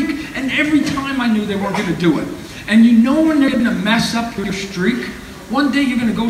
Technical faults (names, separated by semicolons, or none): chunks out of order